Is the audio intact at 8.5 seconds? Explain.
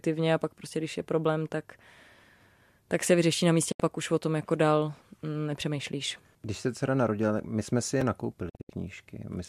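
No. A digital broadcast dropout runs from 8.49 to 8.70 s: the speech fades out over about 8 ms into short silent holes, totalling 144 ms across 192 ms, longest 72 ms. This points to several corrupted frames the receiver muted until clean data returned.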